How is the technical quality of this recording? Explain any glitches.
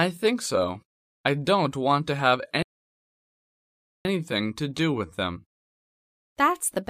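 A playback stall hits from 2.63 to 4.05 s: the sound cuts to silence for about 1.4 s, likely because the player ran out of data, then resumes.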